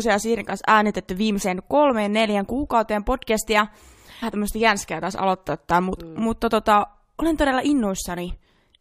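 Speech clip with a stream segment skipped at about 4.22 s: after "kolmeen neljän kuukauteen podcastia" it jumps ahead with a small blip to "tämmöistä jänskeä taas aloittaa", likely a segment that failed to load.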